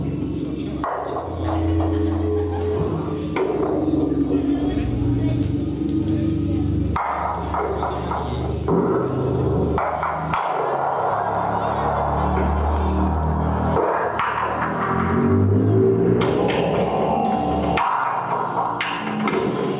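No technical faults can be heard anywhere in this recording.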